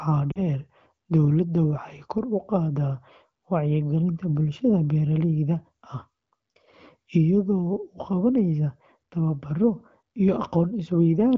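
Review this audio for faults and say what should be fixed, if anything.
Lost AMR speech frames occur at 0.31 to 0.43 s. About 40 ms of speech is missing, which fits two dropped 20 ms frames. The decoder fills the hole by repeating the last good pitch and vocal tract settings at falling gain. The speech smears and dips briefly, then normal decoding resumes. Around the gap, the AMR wideband (HD Voice) codec at 12.65 kbit/s sounds clear.

To prevent this, strengthen the radio link or its error protection so that frames pass their checksum.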